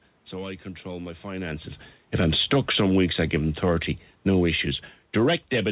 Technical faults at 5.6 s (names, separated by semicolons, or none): automatic gain falling